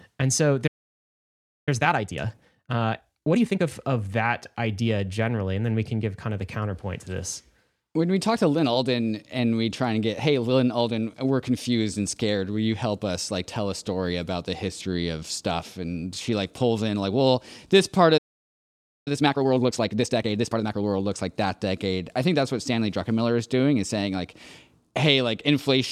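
This speech clip has two playback stalls. The speech cuts out at 0.67 s and stays silent for about 1.0 s, resuming at 1.69 s. It happens again from 18.17 s to 19.08 s, a gap of about 0.89 s. Each time, the speech goes on where it stopped. The likely cause is the player running out of buffered data or its audio thread being blocked. Each stall is followed by time-compressed catch-up. From 1.69 s to 3.67 s, and again from 19.08 s to 20.84 s, the speech runs at 1.5 times normal speed. Its pitch stays the same. The player drops short slices of audio and cross-fades the joins to clear the backlog. That leaves the speech hurried.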